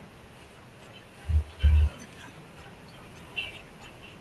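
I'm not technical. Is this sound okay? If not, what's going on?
Yes, this speech sounds fine, with nothing wrong.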